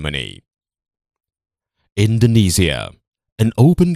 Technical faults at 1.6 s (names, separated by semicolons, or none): none